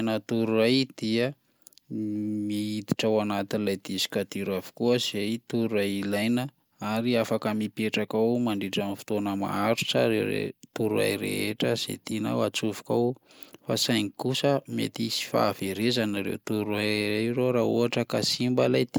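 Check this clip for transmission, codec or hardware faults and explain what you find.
Nothing turned up here: the speech comes through steady and intact, with no transmission, codec or hardware trouble to point to.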